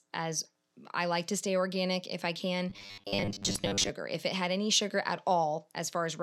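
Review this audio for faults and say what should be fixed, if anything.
From 2.70 to 3.90 s the speech goes robotic, a stiff metallic buzz at a steady 100 Hz that still loosely tracks the words. That points to repeated short buffers, likely a 10 ms chunk looped while most incoming audio got dropped. Fixing it means giving the audio path a deeper buffer and steadier scheduling so fresh samples arrive on time.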